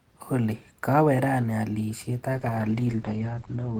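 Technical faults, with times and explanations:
2.34–3.80 s, call bitrate drop: Right after "kawe rani alishet" the speech turns coarse and watery, and the top end collapses to about 8 kHz from a full 20 kHz band. The encoder's budget fell from 32 to 11 kbps and stays there to the end, so detail is coded more roughly and the upper frequencies are discarded. Unlike packet loss, there are no gaps or robotic repeats, just a steady, continuous degradation.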